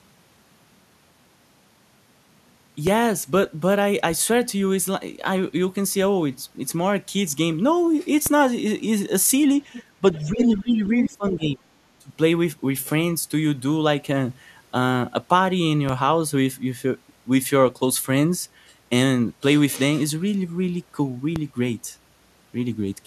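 A low thump at 2.87 s, and another at 8.26 s, marks a DC step. The waveform's zero line jumps abruptly and then drifts back, decaying as a 5 Hz high-pass would return it, so each step is heard as a brief thud beneath continuous speech. The same thump returns at 15.89 s and 21.36 s, and the speech itself carries on unchanged through all four.

From 9.73 to 9.83 s a faint second voice slips in underneath, and it comes back louder from 10.15 to 10.57 s and faintly again from 11.0 to 11.09 s. The stray voice sits about 15 dB below the main speech in the brief scraps and about 10 dB below in the longer one. This is the other side's voice leaking through, likely because the talker's loudspeaker output reached the microphone and the echo canceller failed to remove it fully.

Overlapping that stretch, from 9.98 to 11.66 s, the main speech repeatedly dips and thins, falling by around 20 dB at its deepest and staying affected for roughly a second and a half in total. 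A short dip of the same kind follows from 11.99 to 12.11 s. This is speech suppressed in double talk. With both sides talking at once, the echo canceller likely could not tell its own talker from the returning echo and turned both down together.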